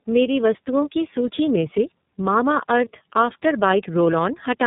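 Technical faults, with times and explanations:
Throughout: tandem speech coding. The speech passed through AMR-NB at 7.95 kbit/s, then G.711 mu-law, then iLBC at 13.33 kbit/s, so the second speech coder re-modelled the first's already degraded output. The result is rougher, warblier and more muffled, with nothing above 3.8 kHz.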